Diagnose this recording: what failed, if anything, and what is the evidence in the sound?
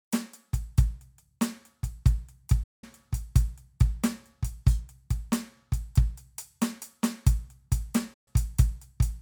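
Digital broadcast dropout at the reception and decoding stage. The music cuts out twice: from 2.63 to 2.84 s, and again from 8.14 to 8.28 s. Each time it fades to silence in about 8 ms and picks back up further along. The holes run about 192 ms and 128 ms, which fits whole 32 ms frames failing their checks. The receiver mutes until good frames arrive again, so whatever was broadcast in those gaps is simply gone.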